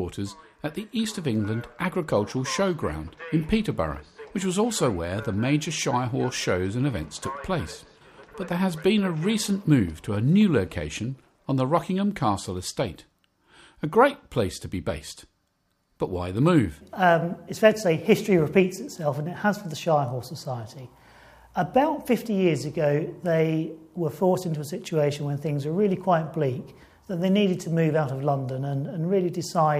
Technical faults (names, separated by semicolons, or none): none